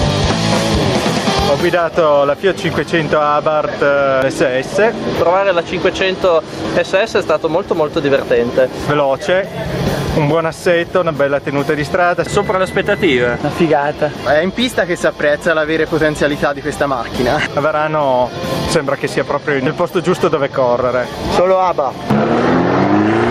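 Across the whole clip the level pumps, a swing of about 15 dB, leaving the audio squashed and breathing. This is gain pumping, likely from input gain set far too high with a fast limiter clamping down.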